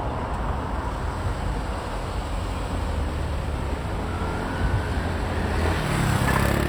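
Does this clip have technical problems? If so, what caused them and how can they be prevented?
No, the audio shows no technical problems: there is nothing in it that points to a fault in recording, processing or playback.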